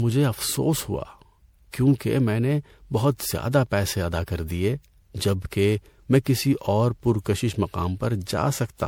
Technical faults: generation loss

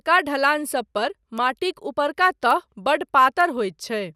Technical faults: bit error spike

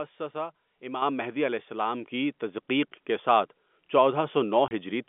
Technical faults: microphone volume stepped up; packet loss filled with silence

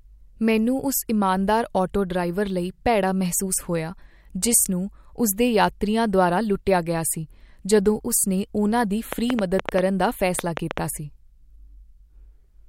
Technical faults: train of clicks

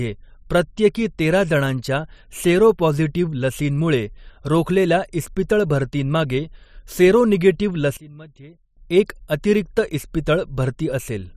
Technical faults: one channel inverted

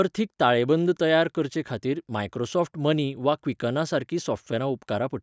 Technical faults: none

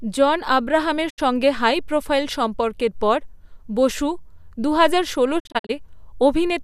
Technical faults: digital broadcast dropout

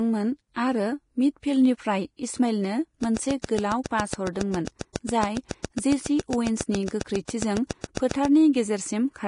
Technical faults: Vorbis compression; train of clicks; pre-echo

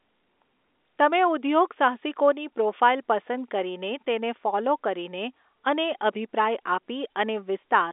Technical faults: none

